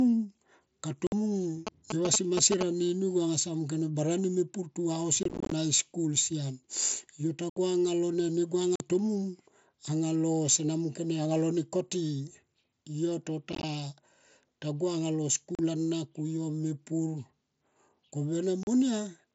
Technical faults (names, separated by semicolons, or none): unconcealed Bluetooth headset packet loss; GSM signalling bursts